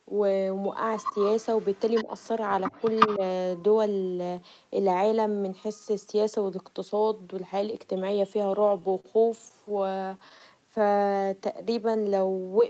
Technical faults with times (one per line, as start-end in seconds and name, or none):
0.98-2.28 echo leak
2.04-2.09 speech suppressed in double talk
2.63-3.19 echo leak
3.17-3.22 speech suppressed in double talk
8.49-10.81 repeated stalls (stutter)
10.55-12.69 jitter buffer slow-down